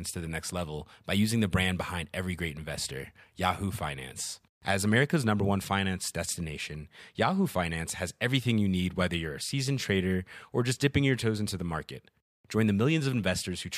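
No technical faults are audible anywhere in the recording.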